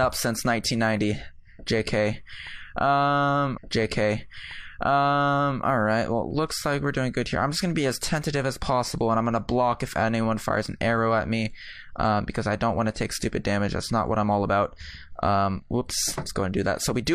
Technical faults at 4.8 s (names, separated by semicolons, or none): stream segment repeated